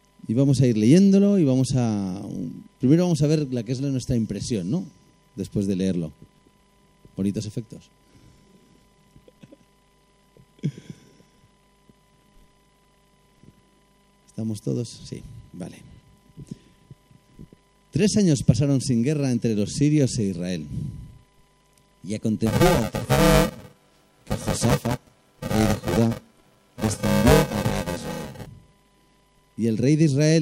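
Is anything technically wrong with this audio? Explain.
Yes, there's buffer tearing from about 22.46 s to 28.46 s. The writer and the hardware reader have slipped, so roughly half of each buffer replays audio about 10 ms stale. That gives a rattly robotic buzz near 345 Hz, which fits a 128-sample buffer.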